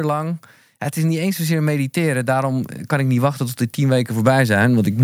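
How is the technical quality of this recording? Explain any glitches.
The recording has one clear fault: an automatic gain rise. From 0.95 s to 4.99 s the level climbs steadily by about 9 dB. The automatic gain control judged the input too quiet and kept pushing its gain upward over those four seconds rather than holding it fixed. Because the gain acts on the whole signal, the speech and the background noise swell together, so the room gets audibly louder along with the talker.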